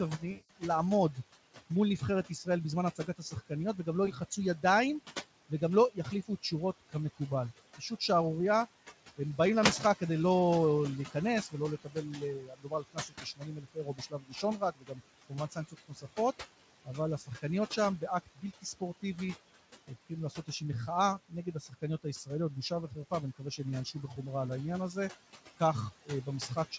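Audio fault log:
throughout: noise suppressor artifacts. The suppressor treats steady background as noise and pulls those bands down, by about 17 dB, frame by frame. The room noise sinks in the gaps and swells back under the speech. The room noise underneath, about 15 dB below the speech, is what the suppressor keeps chasing.
0.18 to 4.64 s, 5.49 to 7.2 s, 11.11 to 16.18 s, 16.85 to 19.03 s, 19.87 to 20.61 s, 21.29 to 24.18 s, 25.6 to 26.78 s: speech cut by the noise suppressor. Inside these stretches the suppressor mistakes parts of the speech for noise. Soft consonants, word endings and quiet passages are turned down with the background, by about 12 to 19 dB at the deepest. They sound swallowed or faint. The worst run is 11.11 to 16.18 s, with roughly two seconds lost. Elsewhere it is a few hundred milliseconds or less per run.
0.31 to 0.5 s and 4.05 to 4.17 s: VoIP packet loss concealed by the speech codec. 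Audio is missing for 180 ms in the first gap and 20 ms in the second. The decoder fills the hole by carrying on from its last pitch and filter while lowering the gain. This stretches the sound into a buzzy tone or tinted noise that fades away. Each frame builds on the one before. So the speech stays weak or smeared for a short while after real audio returns.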